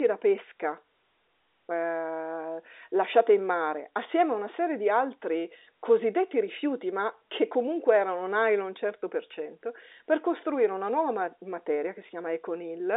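Telephone-line speech with no technical faults to report.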